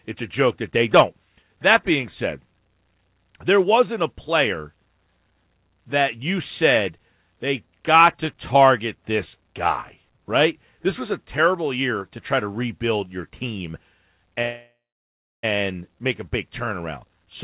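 At 14.42 s the speech stalls into a fading buzz, then about 0.68 s of silence, resuming at 15.45 s with "make a big turnaround". That is a call audio freeze, likely from delayed packets emptying the jitter buffer. Unlike a dropout, nothing is lost. The 4 kHz-limited call sound just continues late.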